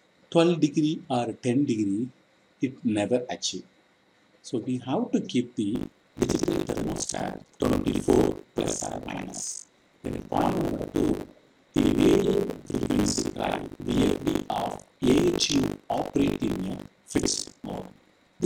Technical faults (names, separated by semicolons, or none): buffer tearing